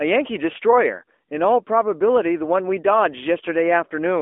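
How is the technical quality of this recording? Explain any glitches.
The recording is band-limited and plainly degraded by AMR narrowband mobile codec damage from start to finish. The AMR-NB coding runs throughout the speech: the codec rebuilds each 20 ms frame from a vocal-tract filter and a few excitation pulses, so the voice takes on a buzzy, synthetic edge, at a level of damage that points to an upper-range rate of around 10 kbps. The audible band sits between roughly 250 Hz and 3.4 kHz, giving a thin telephone tone. On a spectrogram, energy stops sharply at about 3.5 kHz with an empty band above, and the low end is thinned below about 250 Hz.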